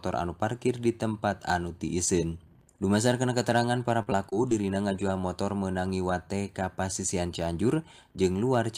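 From 4.02 to 4.64 s the sound turns choppy and robotic, a case of repeated packet loss. Audio arrived late or not at all several times in quick succession, which fits about five lost packets, the longest hole 39 ms. Each gap was patched by stretching the preceding sound, giving a stuttering texture with fragments missing. A spectrogram would show short smeared or repeated slices and abrupt vertical seams, and the waveform would show small blocky discontinuities across that stretch.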